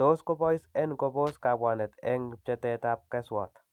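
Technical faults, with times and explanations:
1.27 to 1.34 s, loose connector crackle: a short, irregular burst of scratchy crackle cuts across the speech for roughly 70 ms. A worn or dirty contact in the signal path briefly loses and regains continuity as it shifts, so the audio is chopped on and off in rapid, uneven succession. Each break and reconnection produces a sharp transient, and together these form the rough, gritty texture rather than a single clean click.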